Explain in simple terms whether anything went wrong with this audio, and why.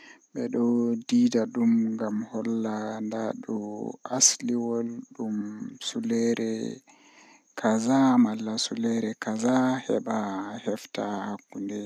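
Nothing went wrong here, as no technical fault can be heard anywhere in this recording. The speech comes through without any dropouts, glitches or interruptions to point to.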